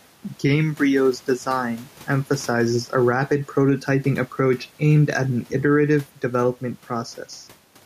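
Throughout the recording, the input gain was likely set far too high, so a fast limiter or compressor pulls the level down on every loud syllable and lets it recover in each pause. That is gain pumping. The room noise sits about 36 dB below the speech, with the gain swinging by roughly 5 dB. The speech sounds squashed, with loud and soft parts pressed close together in level.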